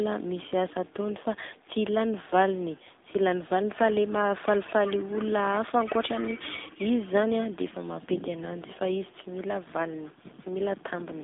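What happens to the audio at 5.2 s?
At 5.2 s the speech is passing through an AMR narrowband mobile codec, which runs through the whole clip. The band is cut to about 250 Hz to 3.6 kHz. A vocal-tract model rebuilds the voice from 2 to 10 pulses in each 5 ms. The low bit budget, which fits around 7.4 kbps, leaves the voice plainly buzzy and synthetic.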